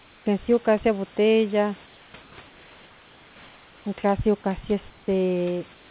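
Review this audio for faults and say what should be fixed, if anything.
Comfort noise in place of the background appears at 0.00–0.26, 1.86–2.14, 2.22–2.38, 2.46–3.86, 4.90–5.08 and 5.74–5.91 s. The room background turns flat and featureless, up to about 6 dB quieter. Discontinuous transmission is the likely cause. Disable it, or improve the comfort-noise model.

Sound dropped by the voice detector occurs at 4.42–4.44 s. The detector likely missed a quiet fragment: about 10 ms of sound is lost, with 20 ms replaced by steady noise. Lengthen the detector's hangover time to prevent this.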